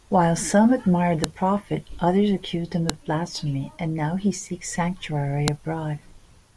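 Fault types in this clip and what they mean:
File header played as audio: the brief burst of bytes at the start of each joined piece is reproduced as samples, heard as sharp snaps at 1.24, 2.90 and 5.48 s. Unlike a splice discontinuity, each is a loud, self-contained spike unrelated to the speech level.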